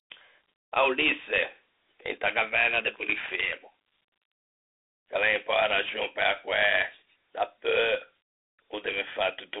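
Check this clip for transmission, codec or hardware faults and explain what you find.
One codec fault runs throughout the speech: Dialogic VOX ADPCM. Coarse 4-bit adaptive quantisation leaves gritty hiss riding the speech, and the band spans 300 Hz to 3.7 kHz, which fits 32 kbps.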